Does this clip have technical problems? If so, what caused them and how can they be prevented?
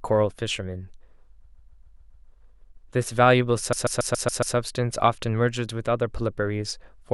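Yes. Repeated frames at 1.44–2.28 s and 3.72–4.55 s: a 139 ms block of speech plays six extra times, stuttering and adding 0.84 s each time. Prevent it by fixing retransmission and buffer-write logic so each encoded frame is written or sent exactly once.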